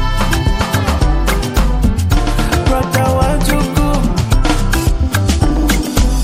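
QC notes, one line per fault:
Nothing stood out on listening.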